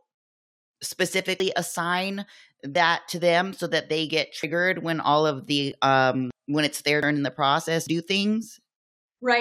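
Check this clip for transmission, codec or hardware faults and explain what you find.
The speech has two kinds of fault, both skips with no silence. At 1.40, 2.75, 4.43, 6.31 (just before "when it's their"), 7.03 and 7.87 s (after "in the") there are jumps where roughly 40 to 100 ms of audio vanishes. This is likely a dropped buffer (overrun): unread samples were overwritten and the two sides were joined directly. The lost stretches are long and fall at irregular times.

At 1.72 and 5.72 s (after "when all of"), tiny skips land exactly 4 s apart. This points to overlap between stream segments, where a player trims overlapping time stamps. These skips are shorter and regular.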